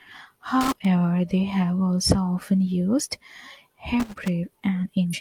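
From 0.61 to 0.85 s and again from 4.00 to 4.28 s, loose connector crackle breaks up the speech: a worn contact makes and breaks, chopping the signal into irregular, scratchy bursts rather than one clean glitch. At 5.10 to 5.15 s, damaged data in a compressed stream makes the decoder lose sync and hunt for the next frame, giving a brief chirp, squawk, click or short hole.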